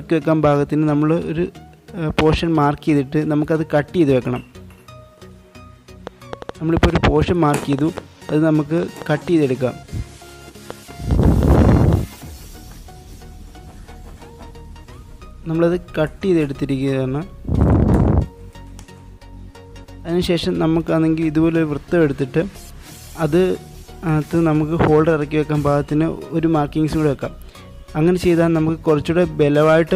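A train of clicks runs from 6.07 s to 11.94 s: around twenty similar pulses at roughly 3.2 per second, unevenly spaced, peaking about 10 dB above the signal and audible as popping even in pauses, likely from electrical interference or a faulty connection or power supply.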